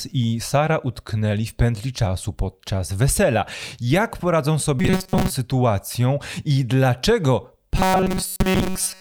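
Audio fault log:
4.79–5.30 s (just before "sytuacją i") and 7.77–9.00 s: robotic sound from repeated short buffers. Speech turns into a rigid metallic buzz at 188 Hz, likely from a roughly 5.3 ms block being replayed while most new audio is skipped. A spectrogram shows evenly spaced 188 Hz harmonic lines, and the waveform shows identical repeating cycles.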